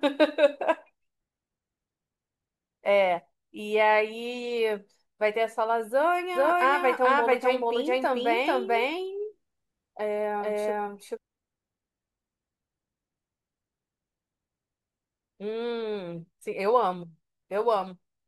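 From 6.35 s to 11.17 s the speech has a doubled audio track. A full-band copy trails the original by roughly 0.4 s at about equal loudness, with no decay or room colour. It starts and stops abruptly, likely from a slower second capture path.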